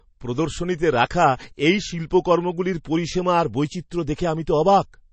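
Likely MP3 compression starved of bits throughout, consistent with a low bitrate around 32 kbps: treble cut off above 8.3 kHz, swirly watery speech, metallic chirps on s sounds.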